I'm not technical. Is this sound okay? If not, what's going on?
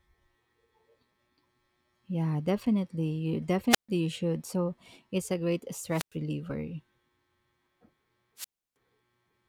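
No. The speech briefly cuts out three times: at 3.70 to 3.89 s, 5.90 to 6.15 s and 8.37 to 8.76 s, each with a rush of hiss, then near silence (about 0.14, 0.10 and 0.32 s). This is wireless microphone squelch dropout: the radio link weakens, so the receiver mutes itself.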